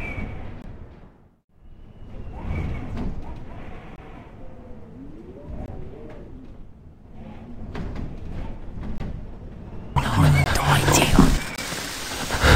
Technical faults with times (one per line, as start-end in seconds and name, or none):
0.62-0.64 block of digital silence
3.96-3.98 block of digital silence
5.66 block of digital silence
8.98 block of digital silence
10.44-10.46 block of digital silence
11.56 block of digital silence